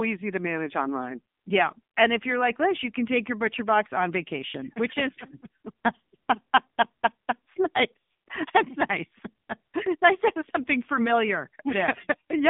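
Throughout the speech, an AMR narrowband mobile codec leaves a 150 Hz to 3.6 kHz line band with nothing above 3.7 kHz. The plainly buzzy, synthetic timbre fits a bitrate near 7.4 kbps. A spectrogram shows a hard ceiling with bare space above.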